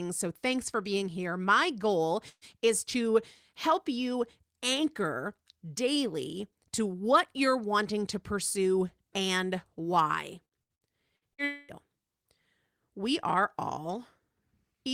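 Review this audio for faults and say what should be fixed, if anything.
The speech carries three network faults worth fixing.

A burst of packet loss hits at 2.29 to 2.44 s. Roughly 120 ms of speech never arrived, and the receiver bridged the hole by extending the last sound and fading it, ending in about 50 ms of silence before the speech picks up further on. It is a single clean hole with a fading held tail, not a run of interruptions, which sets it apart from the choppy stretch later. Adding forward error correction or modest redundancy would let the receiver rebuild a short loss like this.

Repeated packet loss (robotic sound) follows at 10.45 to 11.41 s. Five separate gaps land in quick succession, the longest about 60 ms, totalling about 300 ms missing, so around 28% of that second is patched sound. Each patch repeats the preceding sound briefly, giving a stuttering texture. Unlike the earlier burst, the ear hears many short breaks rather than one. 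A larger adaptive jitter buffer and a steadier network path would reduce these recurring late or lost packets.

Straight after, at 11.44 to 11.71 s, a continuous stretch of about 240 ms is gone and replaced entirely by a decaying continuation of the last sound, never dropping to silence, before speech returns further on. This is likely a long network dropout. It differs from the robotic stretch because it is one unbroken gap, and from the burst because it is twice as long. Fixing the link instability behind it, for example by avoiding congested Wi-Fi, would prevent it.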